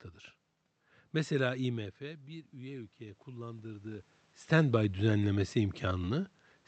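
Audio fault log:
1.68–4.15 s, automatic gain rising: the input drops by about 15 dB, and the gain slowly climbs about 7 dB. Voice and room noise swell together before "standby düzenlemesi".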